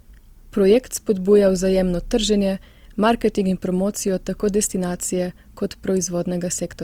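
Throughout the speech, high detail turns grainy and rough, with a noisy fizz where clean texture should be. This is likely Opus compression in CELT mode, fitting about 24 kbps. It swirls less than MP3 would, because starved bands are noise-filled and full bandwidth stays.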